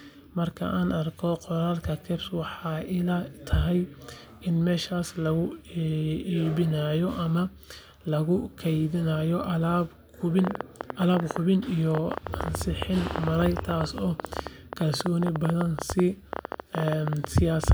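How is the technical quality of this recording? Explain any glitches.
The recording has one clear technical fault, a train of clicks over the last part of the speech.

From 10.39 s to 17.73 s, a train of clicks runs continuously, around a hundred of them at an average of 11.5 per second with uneven spacing. Each is a short, similarly shaped pulse, peaking about 15 dB above the speech, and they continue through the pauses. The likely cause is an external pulse source, such as interference from nearby equipment or a faulty connection or power supply. It is heard as irregular ticking and popping over the talker.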